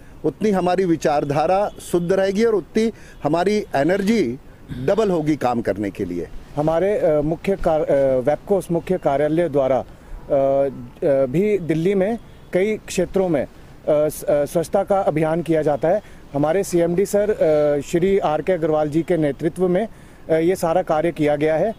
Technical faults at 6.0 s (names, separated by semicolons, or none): none